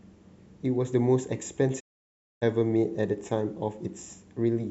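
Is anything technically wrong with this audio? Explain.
Yes. From 1.79 to 2.44 s the speech drops out in a digital broadcast dropout. The receiver stopped getting valid frames and muted, fading out over about 20 ms. Roughly 0.6 s of audio is silent, which fits a run of about 19 lost frames, before the sound resumes.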